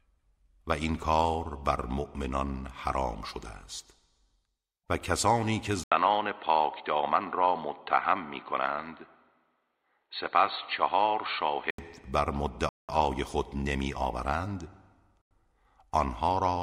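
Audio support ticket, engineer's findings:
Input likely switched to a poorer device at 5.84 s, back at 11.78 s. Narrower capture path cuts everything above 4.4 kHz; sound turns dull and boxy, 80 ms gap at switch, faint new noise floor, level roughly unchanged.

Bluetooth stall, likely interference delaying packets until headphone buffer ran dry. Playback drops to silence at 12.69 s for 198 ms and at 15.22 s for 93 ms, then resumes once retransmitted packets land.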